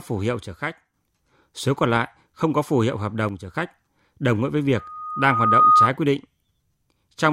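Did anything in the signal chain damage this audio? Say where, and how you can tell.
Yes. One channel drops out twice, from 0.43 to 0.94 s and from 3.29 to 3.55 s: the speech level falls abruptly by about 6 dB, then returns just as suddenly. That step fits losing one side of a stereo pair before the mono sum, so only half of the shared signal remains. The likely cause is an intermittent connection in the analogue wiring or a connector on one channel.

A loudspeaker feedback squeal appears from 4.75 to 5.92 s. A single 1.2 kHz tone swells over roughly a second until it sits around 10 dB above the speech. This is acoustic feedback in the playback and pickup path: a microphone hears the loudspeaker it drives, and at 1.2 kHz the loop gain exceeds one, so the tone keeps feeding itself until the amplifier limits it or the loop is broken.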